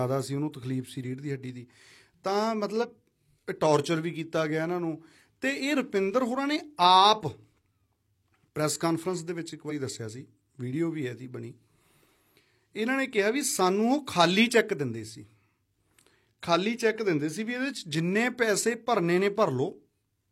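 At 2.79–2.85 s and again at 9.66–9.72 s, damaged data in the compressed stream makes the decoder misread frames and lose sync, giving brief glitches in the speech. Each shows as a short broadband smear or vertical streak on the spectrogram, with a jagged waveform discontinuity.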